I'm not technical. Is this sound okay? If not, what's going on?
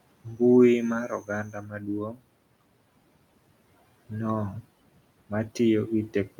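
No. Speech cut by the noise suppressor happens twice, from 0.24 to 0.41 s and again from 1.08 to 2.21 s. A noise suppressor is meant to turn down background hiss, but here it mistook parts of the speech for noise and turned those down as well. Brief stretches, adding up to well under a second in the longer passage, come out swallowed and faint, as if bits of the talking briefly drop away, while the faint room noise underneath stays in.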